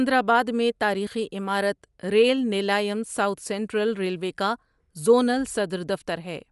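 From start to finish the speech has a clear coded quality: the top end stops dead around 11.6 kHz, and the upper frequencies have a grainy, breathy texture you can plainly hear. That points to Bluetooth LC3 compression as the likely cause. The transform coder works in short blocks, which fits 10 ms frames, and at what sounds like a moderate rate of about 48 kbps it strips detail and caps the bandwidth.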